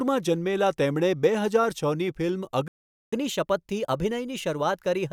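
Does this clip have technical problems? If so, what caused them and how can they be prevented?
Yes. A playback stall silences the speech from 2.68 s to 3.13 s, right after "છની ફિલ્મ", a gap of about 0.45 s. This is likely due to the player's buffer running dry or its thread being blocked. Larger jitter buffers and a higher-priority audio thread would prevent it.

Catch-up at higher speed follows from 3.13 s to the end at 5.12 s. The player resamples its backlog at 1.1x, so the speech sounds hurried and roughly a semitone and a half higher. Pitch-preserving time-stretching, or dropping the backlog, would avoid this.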